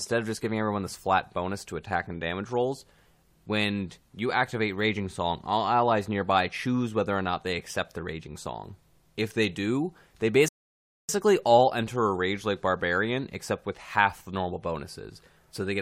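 Right after "they do they", at 10.48 s, there's a rebuffering stall: the player ran dry of downloaded audio and just waited. You get about 0.6 s of dead silence until 11.09 s, then the speech picks up exactly where it left off, with nothing missing.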